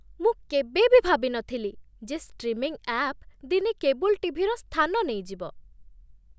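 Nothing in this bit of speech stands out as a technical fault; it just runs along without any glitch, dropout or odd artefact to point at.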